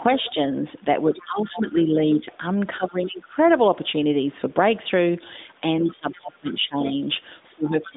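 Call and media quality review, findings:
Speech suppressed in double talk, 7.52 s to end of clip. Talker dips hard, about 20 dB at worst, for the final 400 ms or so. Likely the echo canceller's double-talk handling: far end talks over, canceller can't separate near speech from loudspeaker echo, clamps both. Carried over an AMR-NB narrowband path, nothing above 3.8 kHz, light codec grit fitting the 12.2 kbps mode, not part of the dropout.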